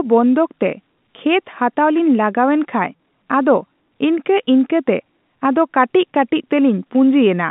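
Nothing stood out on listening to this telephone-band speech recording.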